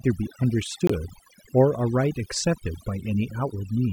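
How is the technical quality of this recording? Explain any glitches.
The recording has two clear faults: processing damage across the whole clip and one brief dropout.

Overdone noise removal runs throughout. The noise reducer was pushed too hard, switching off individual frequency bands whenever they dipped near its noise estimate, so quiet speech detail vanished along with the noise. The background collapses to near silence with twinkling specks. A spectrogram shows scattered isolated dots between words and ragged holes inside the harmonics.

A corrupt frame muted from 0.87 to 0.91 s. The decoder rejected damaged compressed data and the player substituted silence, leaving a 40 ms hole. That length fits two 20 ms frames. The sound cuts out abruptly, then resumes in time. The waveform drops to a flat line with sharp edges.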